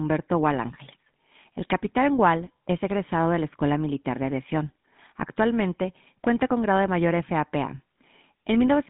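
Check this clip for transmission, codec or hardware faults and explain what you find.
There's one fault, and it runs the whole way through: GSM full-rate codec. The speech is squeezed into roughly 150 Hz to 3.6 kHz, and the codec models the vocal tract and rebuilds the excitation from sparse regular pulses, which fits a 13 kbps GSM full-rate stream. The result is a plainly audible buzzy, gravelly roughness on the voice.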